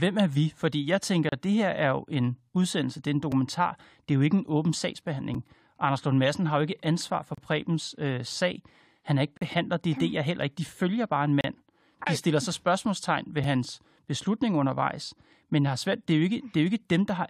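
Gaps between stream segments occur at 1.29–1.32 s, 3.32 s, 5.34 s, 7.35–7.38 s, 9.37–9.41 s, 11.41–11.44 s and 13.44 s, roughly every 2 s. Each 2-second segment starts slightly late, so the player inserts silence, a hard-edged dropout of 4 to 39 ms.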